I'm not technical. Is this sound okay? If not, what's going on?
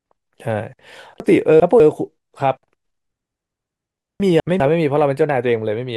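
No. The speech has chunks out of order at 1.2 to 1.8 s and 4.2 to 4.6 s. A 200 ms slice arrives late and plays after what should follow it, so the sound jumbles briefly. Unlike a dropout, nothing goes missing.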